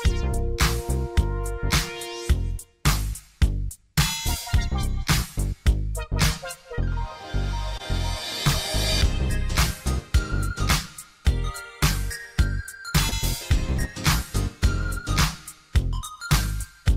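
Short concealed packet loss occurs at 6.75 to 6.80 s, 7.78 to 7.81 s and 13.09 to 13.13 s. Each time, about 20 ms of audio arrived too late. The receiver extended the preceding sound and blended back, leaving a brief smear or wobble.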